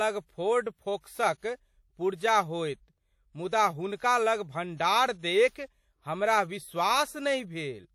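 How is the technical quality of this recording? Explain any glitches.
The speech has clearly audible coding damage throughout. WMA compression, throughout: the audio is likely coded in long transform blocks that spread quantisation noise over tens of milliseconds and zero weak components, consistent with WMA 1 near 48 kbps. It sounds ringing and washy, with breathing hiss and nothing above 19.1 kHz.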